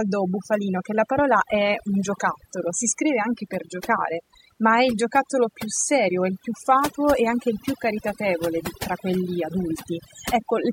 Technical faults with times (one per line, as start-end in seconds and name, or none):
0.00-10.72 overdone noise removal